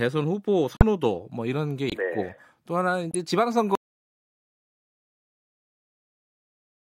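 Corrupt frame muted at 0.77 to 0.83 s, 1.89 to 1.94 s and 3.11 to 3.15 s. Each time, damaged compressed frames in the speech were rejected by the decoder, and the player filled the missing span with silence. The result is a short, sharply cut hole of roughly 40 to 65 ms, as if the sound were switched off and on again. The words continue on schedule afterwards because timing is preserved.

Audio dropout to silence from 3.75 s to the end. Here the sound cuts off in mid-flow and never returns. The remaining three seconds or so are silent, with no room tone or background hiss. The likely cause is that the input signal was lost, through a disconnected device, a failed link or an accidental mute, while recording or encoding carried on writing silence. Anything spoken after that point is gone.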